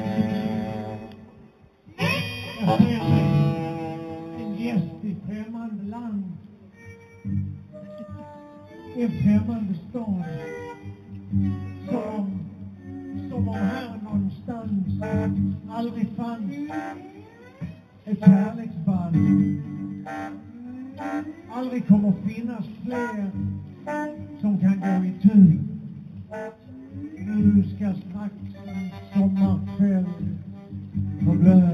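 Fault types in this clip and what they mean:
Imaging from linear upsampling: The audio was raised to a higher rate by joining samples with straight lines. That acts as a weak filter. The top of the original band, near 4 kHz, sounds dulled. A fainter mirror copy of the spectrum sits from 4 kHz to 8 kHz, about 35 dB below the signal. It runs throughout as a light metallic shimmer on bright, hissy sounds. This fits a conversion from 8 kHz to 48 kHz.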